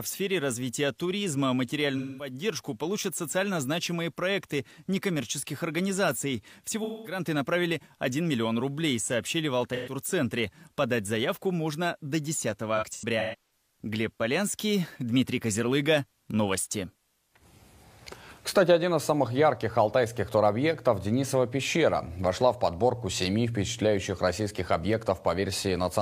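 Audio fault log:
1.97–2.33 s, 6.83–7.20 s, 9.74–9.93 s, 12.77–13.40 s: AAC frame loss with concealment. Gaps of about 213, 213, 128 and 384 ms, the last scattered with runs up to around 150 ms, are filled from the previous spectrum. They sound smeared, noisy or phasey rather than silent like a plain dropout.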